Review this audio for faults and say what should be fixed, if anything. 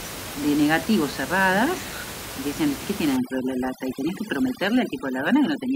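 From 3.17 s to the end at 5.75 s there's overdone noise removal. The reducer is pulling down any band near its noise estimate. With room noise only about 11 dB under the speech, quieter voice detail goes too, leaving a background that drops and breaks up into twinkling specks. Ease off the reduction strength, or cut the room noise at the source so it needn't work so hard.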